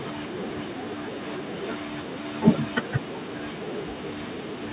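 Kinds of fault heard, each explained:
No faults are present in this speech recording, which has passed through a call path whose narrowband coding leaves nothing above 4 kHz, consistent with G.711 mu-law at 64 kbps.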